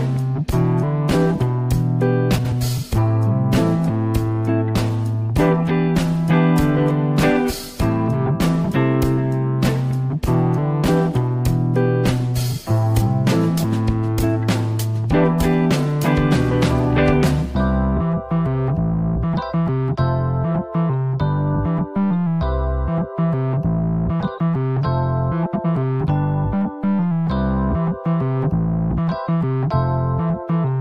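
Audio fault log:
2.37–2.53 s, frames out of order: a brief garbled flutter, because two adjacent 69.7 ms blocks were decoded swapped, with no time lost.
25.46–25.65 s, frames out of order: a similar stuttering flutter, as two neighbouring 92.9 ms blocks played in reversed order.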